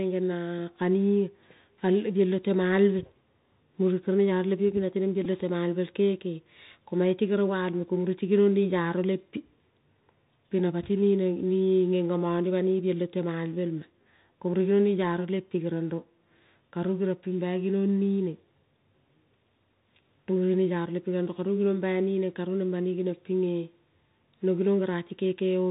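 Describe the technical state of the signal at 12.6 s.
At 12.6 s the speech is still running through a Bluetooth CVSD headset codec, and that holds for the whole clip, not just this moment. The band stops at 4 kHz, which fits a 64 kbps CVSD link: one bit per sample just nudges the level up or down, with the step size adapting as it goes. It's plainly audible here, with scratchy s sounds, loud bright bits outrunning the step and distorting, and a granular hiss underneath.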